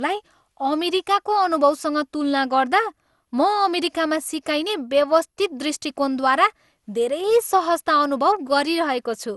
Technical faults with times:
0.00-9.37 generation loss

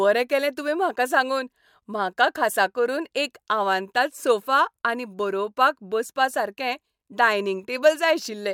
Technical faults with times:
none

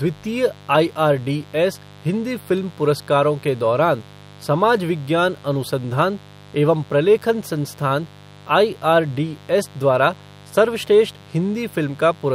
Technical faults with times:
0.00-12.35 mains buzz

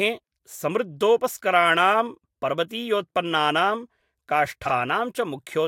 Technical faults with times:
4.65-4.71 frames out of order

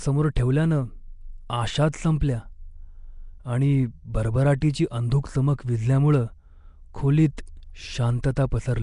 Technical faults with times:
0.00-8.82 Nellymoser compression
1.92 pre-echo
2.20 pre-echo
4.61 pre-echo
7.37 pre-echo
8.23-8.37 pre-echo

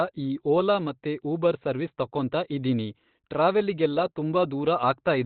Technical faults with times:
0.00-5.25 Opus compression

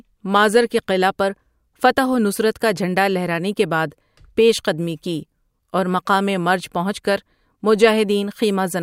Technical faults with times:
1.04 bit error spike
8.51 bit error spike

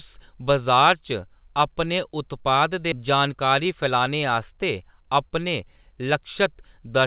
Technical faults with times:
2.92-2.94 skip ahead
3.02-4.08 jitter buffer speed-up

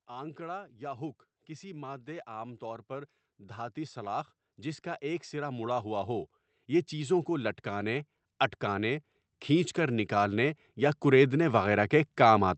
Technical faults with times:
0.07-12.57 automatic gain rising

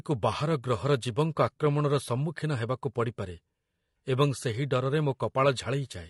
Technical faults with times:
0.00-6.10 low-delay AAC compression

